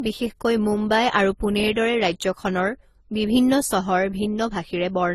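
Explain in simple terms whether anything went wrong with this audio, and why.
The speech was likely squeezed by one lossy codec and then re-squeezed by a second, which is called transcoding between lossy codecs. Throughout the clip, both sets of compression artefacts stack up, and nothing above 14 kHz survives.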